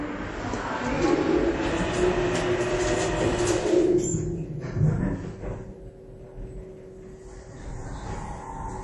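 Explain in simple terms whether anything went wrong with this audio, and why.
Something did go wrong. The whole clip has a clear watery, swirly quality, with the top end gone above about 11.4 kHz. That's most likely MP3 compression squeezed too hard, so it drops the treble and lets faint details flicker in and out.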